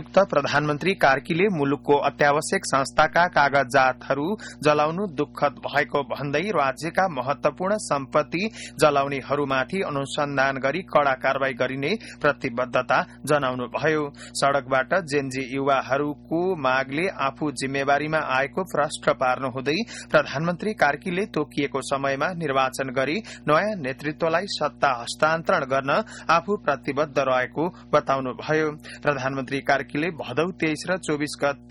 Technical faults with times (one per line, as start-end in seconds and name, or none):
0.00-31.70 mains hum